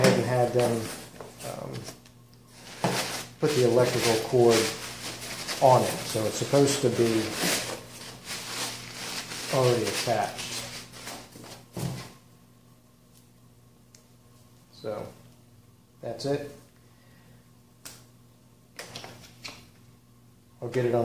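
Nothing technically wrong turns up anywhere in this audio, so there's no fault to point to, no time to flag and no cause to explain.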